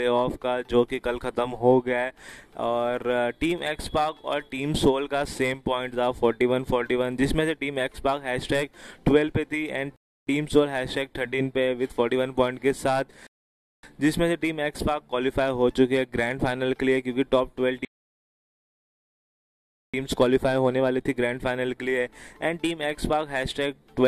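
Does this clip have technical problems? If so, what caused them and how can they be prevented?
Yes: rebuffering stalls at 9.96–10.27, 13.27–13.83 and 17.85–19.94 s, where playback outran the download and went silent for about 0.3, 0.6 and 2.1 seconds, then resumed exactly where it stopped. A larger playback buffer before starting, with adaptive bitrate switching to a lower quality when throughput drops, would prevent these pauses.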